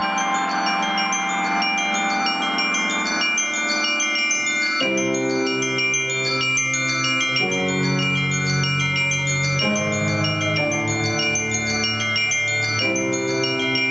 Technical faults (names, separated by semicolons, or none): gain pumping